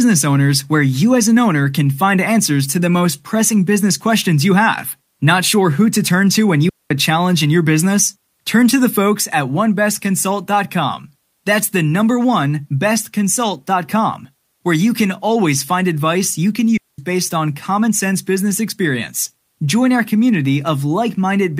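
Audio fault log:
6.69–6.91 s and 16.77–16.99 s, digital wireless dropout: the wireless link lost too much data and the receiver muted with a very quick fade, leaving clean holes of near silence of about 0.22 s and 0.21 s, after "to turn to when" and after "find advice you can", with no noise burst either side.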